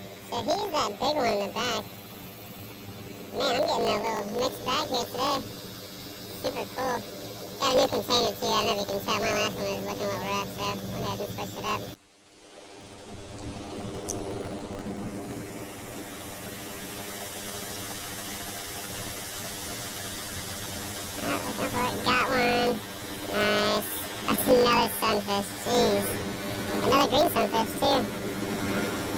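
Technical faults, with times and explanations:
Throughout: planar audio read as interleaved. Each 20 ms block of left-then-right samples is read as alternating pairs, so every block plays twice at double speed, an octave up, first left then right. The blocks are this short, so the sound takes on a robotic 50 Hz buzz.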